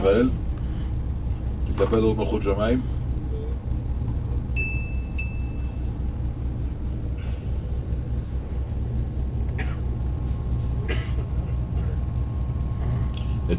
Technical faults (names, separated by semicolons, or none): none